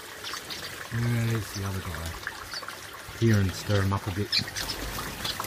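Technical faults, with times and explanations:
0.80 s, 3.08 s and 4.61–4.63 s, damaged data in a compressed stream: brief chirps or blips, each 20 ms or less, where corrupted bytes make the decoder misread frames and hunt for the next valid header.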